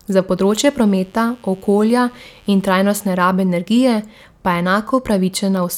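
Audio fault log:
0.37–3.13 s, mains buzz: raspy 50 Hz-based buzz under the speech, sitting about 35 dB down, with harmonics climbing into kHz, unlike a smooth hum's pure low tone.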